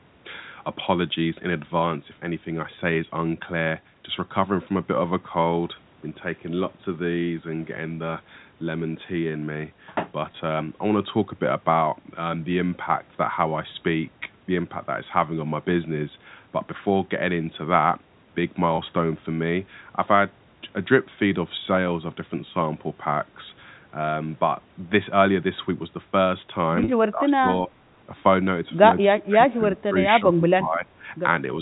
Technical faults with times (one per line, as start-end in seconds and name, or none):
10.32-10.34 packet loss with pitch repetition
18.76-18.78 packet loss with pitch repetition
26.84-26.88 packet loss with pitch repetition
27.11-27.47 speech suppressed in double talk
29.13-29.94 speech suppressed in double talk
30.20-31.04 speech suppressed in double talk